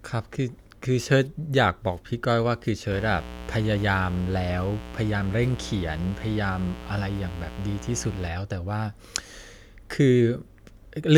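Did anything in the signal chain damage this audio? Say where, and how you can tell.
Yes. From 2.91 s to 8.28 s a steady, raspy mains buzz sits roughly 15 dB under the speech. It is built on 60 Hz, with harmonics reaching into the kilohertz range. That points to the analogue wiring stage, where switching spikes from poor shielding or a nearby dimmer leaked into the line.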